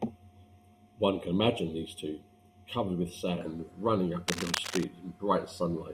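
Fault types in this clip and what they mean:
Channel delay (comb filtering): From the start to about 3.4 s, one channel trails the other by roughly 0.3 ms. Summed to mono, this cancels shared content at evenly spaced frequencies, the first near 1.5 kHz, leaving the speech hollow and phasey.
Cable scratch noise: From 4.28 to 4.84 s, dense, irregular bursts of scratchy rustling sit over the speech, only around 5 dB below it. The likely cause is a worn cable or connector being moved, with its contact resistance fluctuating rapidly.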